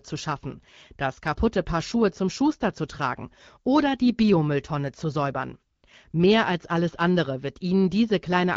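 At 5.75 to 5.83 s there is AMR comfort noise. For 80 ms the phone stopped sending speech frames, and the receiver filled the gap with synthetic noise. The real background drops out and a smooth, steady hiss takes its place. It happens again at 6.11 to 6.13 s, for 20 ms. Each switch is brief. The light coding of the wideband HD Voice link underneath fits a rate around 12.65 kbit/s.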